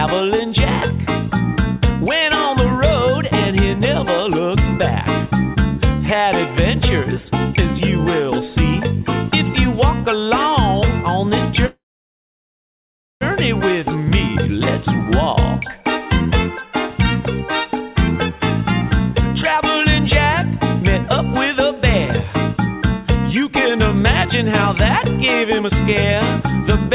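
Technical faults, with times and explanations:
11.66 to 13.23 s, call audio freeze: The sound stalls. A brief fading buzz continues the last moment, then about 1.4 s of silence follows. Playback then resumes where it stopped. Delayed packets likely drained the jitter buffer. Nothing is lost; the whole 1.55 s is inserted delay.
15.82 to 16.73 s, 17.68 to 18.41 s, 19.47 to 19.86 s and 24.52 to 26.91 s, jitter buffer speed-up: The audio runs hurried at unchanged pitch, 13, 9, 13 and 5 percent fast. The receiver cuts tiny pitch-period slices, roughly 150, 70, 50 and 100 ms in total, to shrink excess buffered delay.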